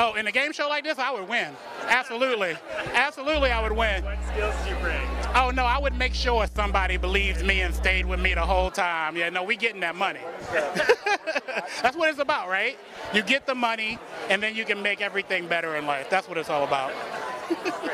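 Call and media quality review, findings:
Mains hum, 3.33 to 8.70 s: steady 60 Hz tone with low harmonics, roughly as loud as the sound itself. Probably a ground loop or a nearby transformer getting into the analog input, so worth checking cabling and grounding first.

Sudden gain jump, 6.48 to 6.56 s: sound and background noise drop together by about 12 dB in one step, with no fade. Likely a digital gain setting or bit shift applied without a ramp somewhere in the processing chain.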